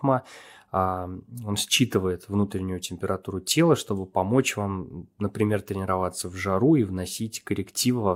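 No dropouts, clipping, distortion, glitches or level jumps turn up anywhere in the speech, so there is nothing to flag.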